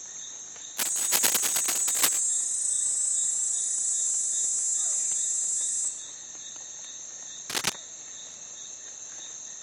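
From 0.77 to 2.21 s and again from 7.50 to 7.73 s, cable scratch noise adds dense, uneven scratching bursts at roughly the sound's own level. This is likely from a worn connector's contact resistance shifting.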